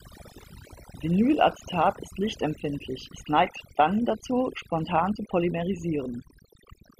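Throughout the speech there's overdone noise removal: the reducer was set so hard it gated whole frequency bands, leaving a near-silent background full of twinkly specks.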